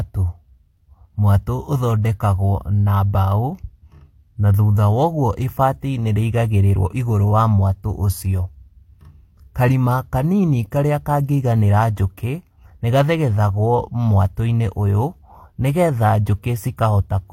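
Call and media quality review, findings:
Speech throughout, whole clip: two layers of codec artefacts heard together, nothing above 16.2 kHz. Likely transcoding between lossy codecs. Character points to a Vorbis pass near 64 kbit/s re-encoded as HE-AAC near 32 kbit/s. The second encoder spends bits re-coding the first one's artefacts and adds its own. The lowest cut-off survives.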